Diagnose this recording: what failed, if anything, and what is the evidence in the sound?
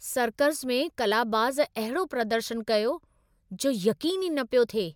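Nothing failed at any stage of this speech recording.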